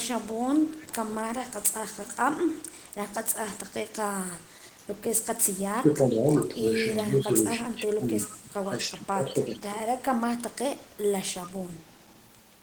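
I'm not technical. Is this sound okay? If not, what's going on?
No, there are two problems, both probably caused by the echo canceller on the other end of a speakerphone call.

Echo leak: The other side's echo canceller likely failed to fully remove what its microphone picked up from its loudspeaker, so part of the sound was sent back. You hear a faint, delayed copy of the voice, about 0.37 s behind, at 0.68–0.93 s, 2.58–2.93 s, 4.51–4.77 s (barely audible), 8.2–8.35 s and 10.93–12.24 s. The last stretch is the longest and the most noticeable.

Speech suppressed in double talk: When both sides talked at once, the echo canceller could not tell its own talker apart from the echo and turned everything down. The voice briefly dips at 4.77–4.83 s, drops more clearly in patches between 5.72 and 6.5 s, and fades deepest between 7.09 and 10.46 s, where about a second in total is pushed down in pieces.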